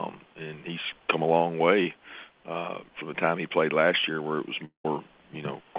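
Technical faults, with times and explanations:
4.65–4.85 s, long network dropout: the sound breaks off for about 0.2 s. The last moment is stretched into a fading buzz, which sinks into roughly 0.12 s of near silence before the audio resumes further along, with the gap's content gone. The likely cause is a stall in incoming call audio, with the receiver concealing what never arrived. The tail of the fading synthetic buzz, then near silence, separates it from a brief concealment glitch or a clean edit cut.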